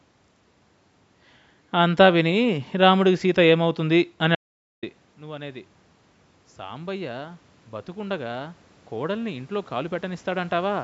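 At 4.35 s there's an audio dropout to silence that runs until 4.83 s, so roughly half a second of the speech just vanishes. It's plain silence, not a quiet patch; even the room noise disappears, and the voice snaps back mid-flow. The likely cause is the input briefly going missing, a loose connection or a stray mute, while the recorder kept writing silence. Whatever was said in that gap is gone for good.

From 6.56 s to the end at about 10.79 s you can hear automatic gain rising. The input level falls by about 17 dB, and the gain control responds by slowly raising its gain by about 8 dB over those four seconds. It only partly catches up, so the voice still ends up quieter. Because the gain applies to everything, the background room noise swells up along with the voice instead of staying put.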